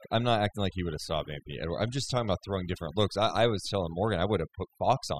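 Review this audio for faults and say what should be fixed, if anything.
Overdone noise removal runs throughout the speech. The noise reduction was set too strong, pulling individual frequency bands far down or out whenever they sat near its noise estimate. The background collapses into twinkling, warbling specks, and quieter parts of the speech disappear with it. To prevent this, use a gentler reduction setting and check the result by ear before applying it to the whole recording.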